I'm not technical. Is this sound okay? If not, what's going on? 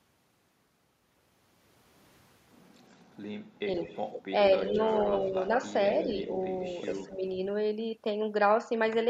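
No. There are two problems.

An echo leak: a delayed copy of the speech, trailing about 0.13 s behind, appears at 2.98–3.18, 3.76–4.22, 4.67–5.05, 5.38–5.48 and 5.84–7.14 s. It ranges from barely there to fairly noticeable. The likely cause is a loudspeaker on the other end feeding back into its microphone. What sets it apart is that something extra is heard.

Speech suppressed in double talk: at 4.68–4.8, 5.26–5.5 and 7.06–7.25 s, the talker's voice briefly sinks, mildly at first and more clearly later. This likely happens because both sides overlap and the echo canceller turns everything down. Here, sound is lost rather than added.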